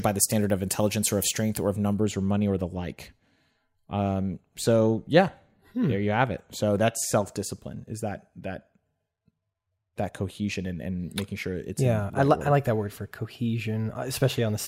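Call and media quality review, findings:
Thin, bright, hissy sibilance, 0.0–2.0 s, ending just before "or money or the". Pre-emphasis left on: treble lift about 13 dB at 10 kHz relative to 1 kHz, fitting an FM 75 µs curve, de-emphasis stage not applied.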